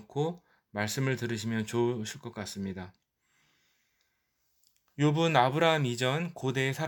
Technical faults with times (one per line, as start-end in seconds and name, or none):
none